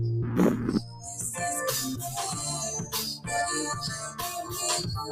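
A noise suppressor applied to music or sounds is active throughout. Built for speech, it treats sustained material as noise, so the level swings by around 10 dB and held tones pump and thin. On a spectrogram, sustained bands flicker while onsets stay solid.

The sound is cut by the noise suppressor from 0.78 to 1.07 s, dropping by about 11 dB, and again from 1.95 to 2.16 s, by about 8 dB. Each lasts a fraction of a second. The waveform envelope visibly sags there, and tails fade early.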